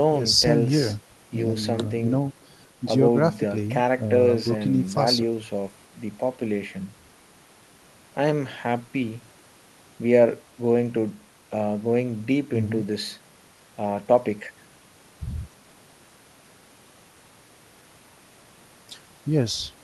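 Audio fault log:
No faults heard anywhere in this speech recording.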